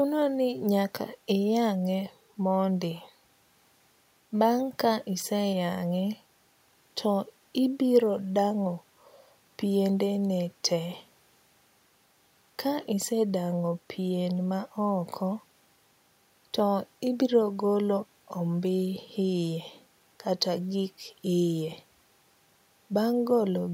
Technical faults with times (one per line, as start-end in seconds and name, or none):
none